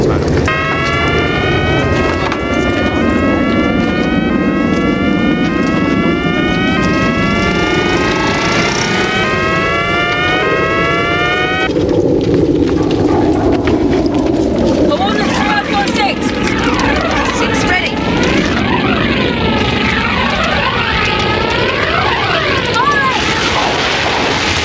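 Gain pumping throughout: the gain ducks around 10 dB under each loud sound, likely excessive input gain driving a fast limiter.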